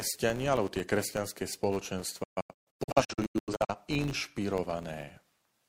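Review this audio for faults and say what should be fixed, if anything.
Throughout the speech there is a 100 Hz buzz from a filter restarted on every block. Each processing block starts the filter from silence, so every boundary produces a small transient, and at this rate that fits a 10 ms block size. The buzz grows and shrinks with the speech level, which separates it from mains hum, whose level stays fixed regardless of the signal. To prevent it, carry the filter's internal state across block boundaries instead of resetting it.

From 2.23 s to 3.75 s the audio breaks up with a digital broadcast dropout. The receiver muted whenever frames were missing or corrupt, leaving several short holes spread over about 1.45 s. They total about 0.85 s of lost audio, and the longest gap is 128 ms. Each cut fades in about 8 ms, and the missing speech never returns. This tells it apart from a network buffer stall, which pauses and then resumes where it stopped. 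To prevent it, improve reception or add error protection and concealment on the broadcast link.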